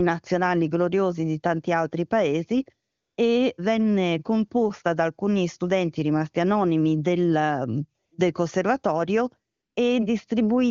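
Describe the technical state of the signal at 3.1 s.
At 3.1 s the AMR comfort noise is active: the sending phone judged the pause after "di tanti altri paesi" to be silence and stopped transmitting speech frames from about 2.89 to 3.17 s, roughly 280 ms. The receiver filled that gap with synthetic noise built from a rough description of the background's level and spectrum, so the real ambience is replaced by a smooth, steady hiss that switches off again as "venne composta da alcuni" begins.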